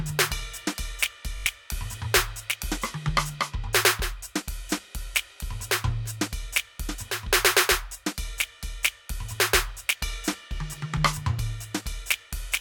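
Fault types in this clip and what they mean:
Bluetooth stutter: from 1.36 to 1.46 s the music snags on one short slice replayed over and over, a brief machine-gun buzz, then resumes about 85 ms further on, which fits four lost packets. A plain dropout would leave silence there instead of repeats.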